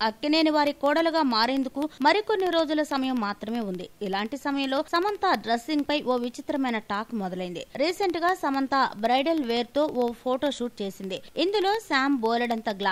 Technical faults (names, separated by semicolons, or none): periodic USB or driver dropouts